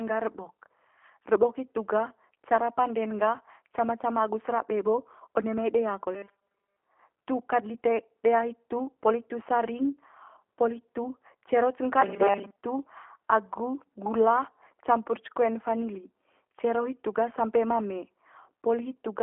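From start to finish the speech carries the sound of the G.729 codec, most likely the G.729A variant at 8 kbit/s. Nothing reaches above about 3.6 kHz, and the line band sits around 200 to 3400 Hz, so sibilants go dull and the low end thins. The codec damage is plainly audible. Rebuilding each 10 ms frame from a vocal tract filter, a pitch predictor and a few pulses leaves the speech rough and slightly synthetic.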